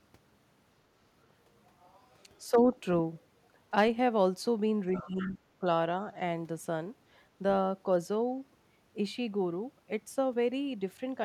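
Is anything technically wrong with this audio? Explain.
Yes. There are two kinds of fault. Speech is suppressed in double talk three times: a slight dip from 2.5 to 2.6 s, a deep cut of roughly 20 dB from 4.94 to 5.44 s, and a brief dip from 5.6 to 5.65 s. The cause is likely an echo canceller that could not tell the talker from loudspeaker echo and turned everything down. Unlike packet-loss dropouts, these are level dips, not clicks or hard silences.

The other side's voice leaks through from 4.94 to 5.33 s, faint at about 20 dB below the talker and overlapping the deep cut. It is a different voice, not a delayed copy of the talker, which sets it apart from room echo. The cause is likely incomplete echo cancellation of the far-end loudspeaker.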